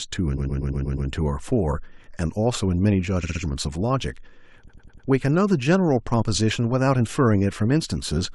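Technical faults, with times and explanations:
0.37–1.09 s, 3.23–3.42 s, 4.67–5.07 s, repeated frames: speech blocks of 120, 60 and 100 ms replay, giving stutters; spectrograms show identical slices copied back to back.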